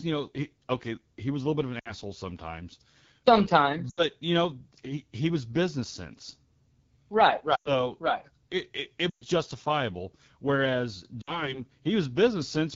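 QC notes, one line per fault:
Throughout: AMR wideband (HD Voice) codec. Speech sounds plainly rough and raspy, fitting the low 8.85 kbit/s mode. At that rate the pulse-driven vocal tract model has too few bits to track the voice closely, and the band above 6.4 kHz is synthetic shaped noise.
1.80–1.94, 3.89–4.05, 7.55–7.86, 9.09–9.25 and 11.22–11.57 s: lost AMR speech frames, after "little bit of an", before "you know he he", and after "it it". Each drops to near silence within two frames, pointing to runs of roughly three to six lost 20 ms frames. The decoder repeats the last good pitch and vocal tract settings at falling gain, then speech resumes briefly weak or rough.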